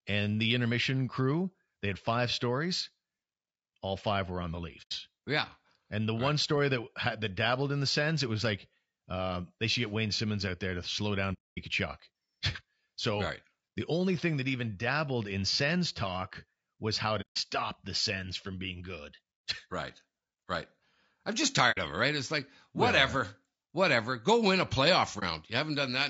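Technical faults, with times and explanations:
throughout: low-delay AAC compression. The speech sounds rough and grainy, with noise between harmonics and a thin top. Likely AAC-ELD at about 32 kbps.
4.82–4.92 s (after "five were on the"), 11.33–11.58 s (after "there to slow down"), 17.21–17.37 s, 21.71–21.78 s (between "right right I'm just" and "of it right"), 25.19–25.23 s: AAC frame loss with muting. The sound fades out and back in, a brief dip for the single lost frame and a soft-edged hole for the longer runs. The lost frames were zeroed and the overlapping windows soften the edges. The gap lengths fit frames of about 30 ms.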